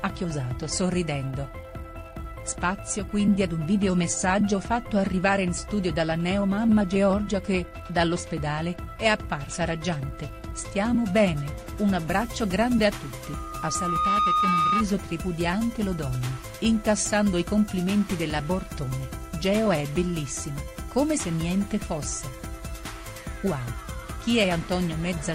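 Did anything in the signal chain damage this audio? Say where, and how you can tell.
Yes, there's loudspeaker feedback squeal in the analogue side, where the mic is hearing its own speaker. At 13.24 s a single tone near 1.2 kHz starts to rise. It swells for about a second and ends up around 5 dB above the rest of the sound before it cuts off at 14.84 s. That steady, self-building pitch is the giveaway: at 1.2 kHz the loop gain went past unity, so the tone kept feeding itself.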